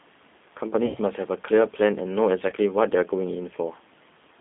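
The whole speech clip passes through a G.729 codec at 8 kbit/s, which rebuilds each 10 ms frame from a vocal tract filter, a pitch predictor and a handful of pulses rather than sending the waveform itself. The line band runs only from 200 Hz to 3.6 kHz, so the voice sounds thin and boxed-in, and the codec damage is plainly audible as a rough, slightly synthetic grain, with the room noise about 41 dB below the speech.

From 0.86 to 0.98 s, VoIP packet loss is concealed by the speech codec. About 90 ms of audio goes missing, which fits three lost 30 ms packets. The decoder fills the gap by extending its last pitch and filter at falling gain, so the sound stretches into a fading tone or coloured noise and stays weakened briefly after real data resumes. A shorter loss of 30 ms, pointing to a single packet, is concealed the same way from 2.49 to 2.54 s and gives a brief fading smear.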